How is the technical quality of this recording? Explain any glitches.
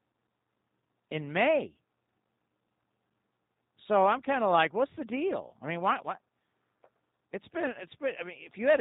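The technical quality is limited by one fault that runs through the whole clip: G.729 codec damage, plainly audible. The speech is rebuilt from a vocal tract filter, a pitch predictor and a few pulses per 5 ms subframe, at a rate consistent with 8 kbit/s. Nothing above 4 kHz survives, and voices sound rough and slightly synthetic. Simple telephone band-limiting removes the same top band but keeps the voice natural, without this buzzy, rebuilt texture.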